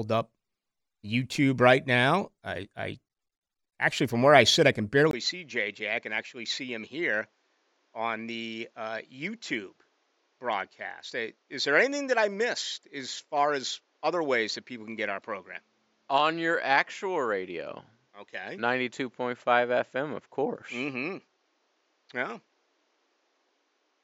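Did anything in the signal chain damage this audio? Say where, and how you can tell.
Yes. Just after "I sit I can", at 5.11 s, the speech turns duller and boxier, with nothing above 7.6 kHz. The level drops by around 10 dB, and a faint new noise floor sits well below the speech. A brief gap of about 20 ms marks the change, which lasts to the end. This is an input switched to a poorer device at the driver stage, most likely another microphone or a headset's call profile.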